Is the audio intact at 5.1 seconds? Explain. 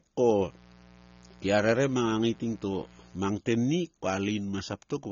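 No. At 5.1 seconds the speech still carries the AAC compression damage heard throughout the clip. The top end is cut off and the sound is dull. The cause is likely AAC-LC coding at a low bitrate, which fits about 24 kbps. The coder drops high bands and coarsely quantises what remains to save bits. This leaves a smeared, warbling, fizzy texture, plainly audible on sibilants.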